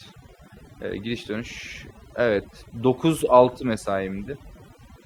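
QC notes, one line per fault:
Throughout: overdone noise removal. The noise reduction is set too aggressively, so frequency bands near the noise estimate are pulled far down or gated off. The background drops and breaks up into twinkling specks, and quieter speech detail goes too.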